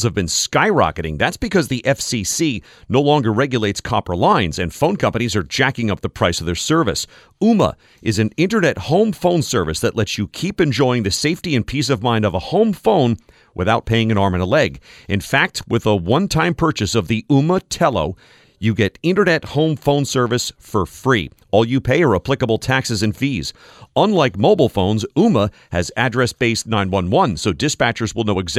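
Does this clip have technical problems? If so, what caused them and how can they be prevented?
No, nothing in this speech recording stood out as a technical problem on listening, so there is nothing here that needs preventing.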